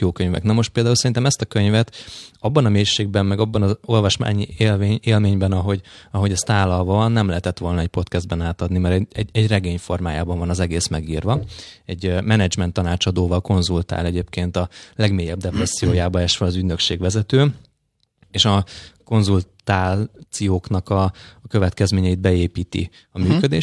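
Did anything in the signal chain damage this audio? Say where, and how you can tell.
No, the signal chain shows no audible damage anywhere in this speech recording, from the first moment to the last.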